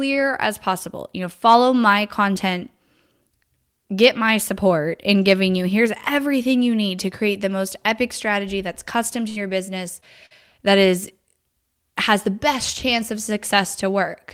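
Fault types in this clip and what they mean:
Burst of packet loss: around 9.29 s right after "epic strategy that's custom", and again at 10.26 s, the receiver stretches the last sound into a fading tail before jumping ahead past missing audio.
Short concealed packet loss: a brief smear from 10.00 to 10.04 s just before "that is", where a few hundredths of a second were patched over and blended back in.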